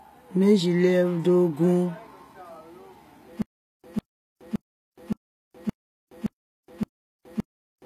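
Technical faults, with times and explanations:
Throughout, HE-AAC compression: the codec damage is plainly audible, with nothing above 14.9 kHz. The treble is likely rebuilt from copied lower bands, so harmonics fail to line up above the crossover. A spectrogram shows a hard ceiling at 14.9 kHz and smeared, repeated-looking upper bands.
3.42 to 7.86 s, stutter with silent gaps: a 150 ms fragment repeats seven times, each followed by about 420 ms of silence, one cycle every 569 ms to the end. This is likely a stalled stream replaying its last buffer. The waveform shows identical bursts separated by flat gaps.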